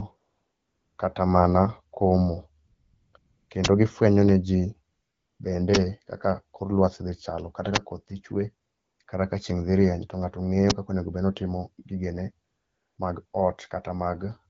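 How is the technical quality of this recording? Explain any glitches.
The recording has two recurring faults: patches of synthetic comfort noise in the pauses and four short, loud digital bursts. The clear, light coding of the wideband phone codec is audible throughout.

AMR comfort noise appears at 0.17–0.97 s (just before "kata mana komo"), 2.65–3.13 s (just after it), 3.17–3.49, 4.91–5.39, 8.67–8.99, 9.03–9.07, 12.47–12.97 and 13.25–13.33 s. The phone stopped sending speech frames, so the receiver generated smooth, steady noise that switches abruptly in and out.

Uninitialised buffer bursts occur at 3.65, 5.75, 7.76 and 10.70 s (the last just before "kaka onego bed"). Leftover memory was played as audio, producing a harsh burst of about 10.7 ms, which fits a 512-sample buffer.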